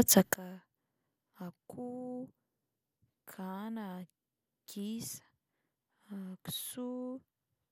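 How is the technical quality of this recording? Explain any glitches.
The recording has one clear level fault. From 0.34 s to the end, a sudden gain jump drops the speech and its background noise together by about 24 dB, likely an unramped digital gain change.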